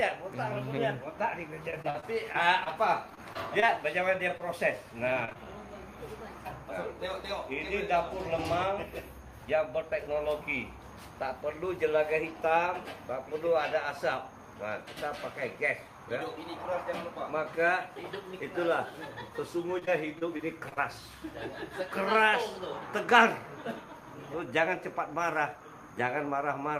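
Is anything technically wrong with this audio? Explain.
Yes. Two kinds of fault recur across the clip.

Repeated packet loss (robotic sound) occurs from 1.55 to 4.41 s, from 5.13 to 5.45 s, and from 19.79 to 20.78 s. The audio turns choppy and robotic, with pieces missing, most densely in the short 5.13 s burst where about a third of the span is patched. Packets kept going missing, and each hole, the longest about 41 ms, was covered by extending the last sound before the next one arrived.

Jitter buffer speed-up occurs from 9.82 to 10.08 s and from 22.66 to 23.14 s. The sound rushes forward at unchanged pitch, running at 111% and then 109% speed. The receiver's buffer had built up excess delay, so it trimmed short pitch-period slices in quick succession, roughly 40 ms and 50 ms in total, to catch up.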